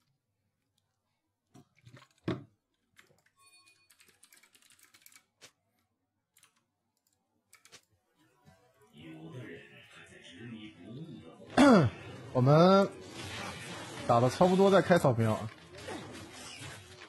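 An adaptive stream dropping to a lower bitrate takes over at 9.98 s and holds to the end. The sound switches abruptly with no gap: the top end turns thin, with swirly codec artefacts, which fits a stream stepping down from about 96 kbit/s AAC to 16 kbit/s HE-AAC as the connection slowed. On a spectrogram, energy above 11.8 kHz vanishes along a hard vertical edge at 9.98 s, while the waveform envelope continues unbroken.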